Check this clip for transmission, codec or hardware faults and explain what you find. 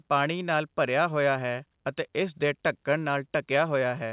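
No faults found; the speech is band-limited at 4 kHz, which fits a narrowband call path running G.711 A-law at 64 kbps and is expected for that route.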